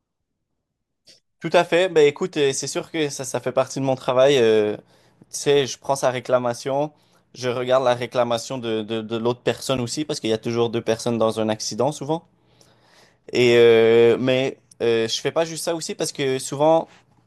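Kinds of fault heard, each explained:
Block of digital silence: at 9.77 s the speech drops to silence for about 10.7 ms, which fits a 512-sample buffer left unfilled, and returns with no fade. It is heard as a tick or dip. The waveform shows a flat gap with abrupt edges, and the spectrogram shows a thin blank column.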